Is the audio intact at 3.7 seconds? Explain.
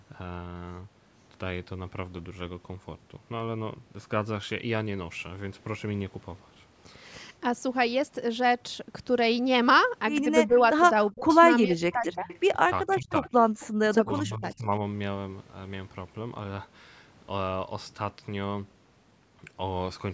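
Yes, the speech at 3.7 seconds is intact, with no dropout, click or distortion at that moment, only the usual light bass trim of call microphone processing.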